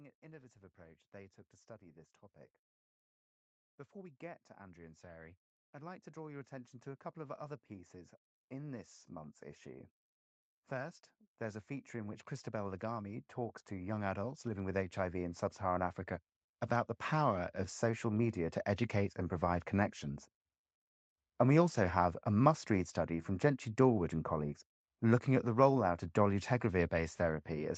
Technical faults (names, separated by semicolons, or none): automatic gain rising